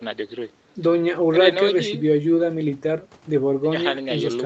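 No technical faults are audible.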